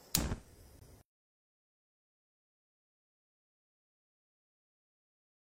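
At 0.79 s the sound stops dead and resumes at 0.82 s. This is a gap between stream segments. Two consecutive pieces of the stream, each about 1.0 s long, carry time stamps that do not quite meet. The player has nothing to play in between, so it inserts about 21 ms of silence. The edges are abrupt, heard as a short, hard dropout in the sounds. Nothing is cut away. The following audio simply arrives slightly later.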